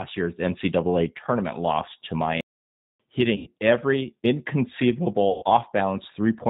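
Throughout the speech, plainly audible G.729 codec damage gives the sound a slightly rough, synthetic quality. The decoder rebuilds each 10 ms frame from a vocal tract filter, a pitch predictor and a few pulses, so fine detail is replaced by an approximation, and nothing above 4 kHz survives. The narrow band and grainy texture fit G.729A at 8 kbit/s.

From 2.41 s to 3.00 s there is a playback stall: the output goes silent mid-flow for about 590 ms before the sound resumes. The likely cause is the player running out of buffered data or its thread being blocked, which leaves nothing to send to the output until it recovers.

At 3.36 s to 3.50 s, VoIP packet loss concealed by the speech codec covers roughly 100 ms of missing audio, consistent with five lost 20 ms packets. The decoder extends its last pitch and filter settings while lowering the gain frame by frame, so the sound smears into a fading buzzy tone or coloured noise. 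Because each frame builds on the one before, the speech stays weak or distorted briefly after real data returns.

The same concealment occurs again from 5.30 s to 5.44 s, this time over about 120 ms, which points to six lost packets. The stretched, decaying concealment is slightly longer here, and the voice again stays weak or distorted after packets return.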